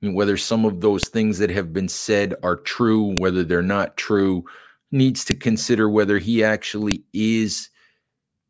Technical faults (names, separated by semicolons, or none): file header played as audio